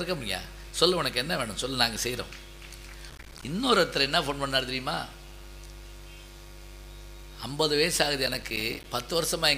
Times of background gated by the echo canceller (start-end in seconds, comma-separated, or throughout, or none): none